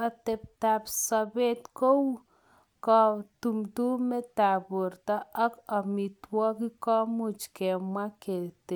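No technical faults can be heard anywhere in this speech recording.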